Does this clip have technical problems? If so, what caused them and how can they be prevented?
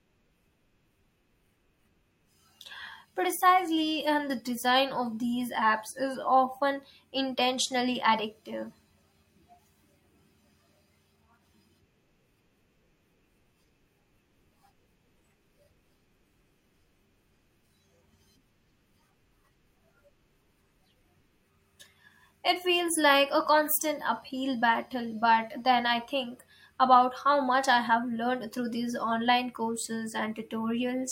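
No, nothing in this speech recording points to a technical problem, so there is no cause to trace and nothing to prevent.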